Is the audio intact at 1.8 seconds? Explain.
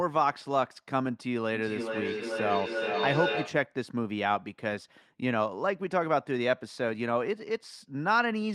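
No. From 1.52 to 3.8 s there is feedback echo between two devices: a second device in the room replays the call, and this microphone recaptures it. The speech returns roughly every 0.4 s, thinner and ringing, peaking about 3 dB below the direct speech.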